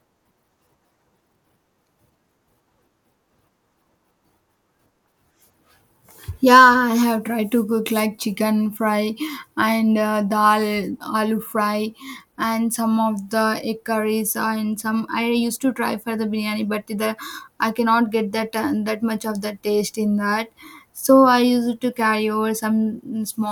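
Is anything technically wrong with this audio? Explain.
No, nothing in this speech recording points to a technical fault in the signal.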